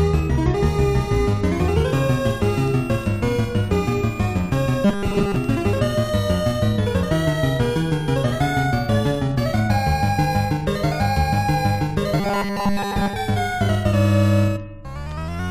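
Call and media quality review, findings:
Robotic sound from repeated short buffers, 4.85–5.36 s and 12.20–13.14 s. Rigid metallic buzz near 200 Hz, likely from a 5 ms buffer replayed when input stalls, replacing most of the real audio. Rough outline of the sound survives.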